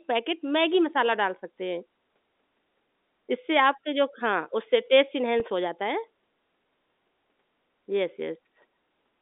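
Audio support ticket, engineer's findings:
Packet loss with pitch repetition at 5.40 s: roughly 10 ms of audio missing, bridged by repeating the last pitch period, heard as a brief held, buzzy blip. Gap length fits a single lost packet on the G.711 telephone-band line.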